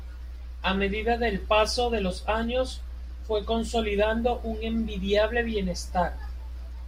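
Listening to this speech recording, nothing stood out as a technical problem at any point.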